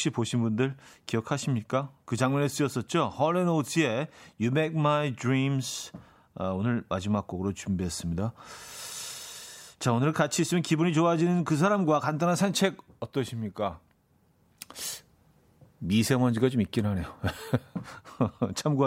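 No technical faults are audible anywhere in the speech recording.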